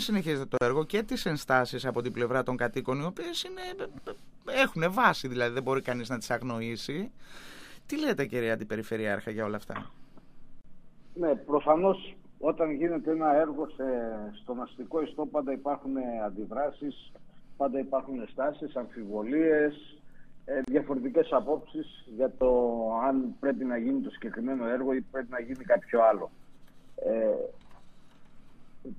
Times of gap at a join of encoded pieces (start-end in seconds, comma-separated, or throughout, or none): 0.57-0.61, 10.61-10.64, 20.64-20.68